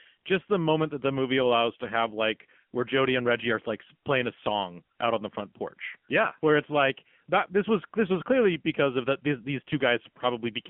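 Throughout, AMR narrowband mobile codec damage thins the speech to roughly 150 Hz–3.4 kHz, buzzy and synthetic, fitting a low 7.4 kbps mode; a spectrogram shows nothing above 4 kHz.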